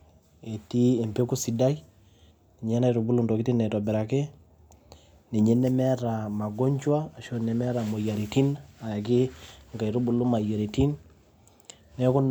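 Nothing stood out on listening to the speech in this recording.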